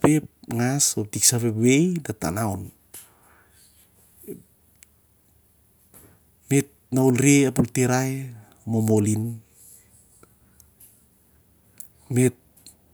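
Nothing is technically wrong with this speech recording.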